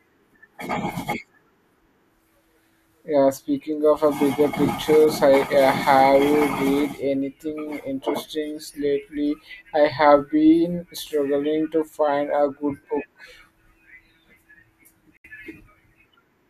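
At 15.17 s the speech drops out in a digital broadcast dropout lasting about 0.08 s. The receiver muted on bad frames, which fits about 72 ms of lost material, with a 3 ms fade into silence. Speech resumes further on, so unlike a stall, nothing is delayed.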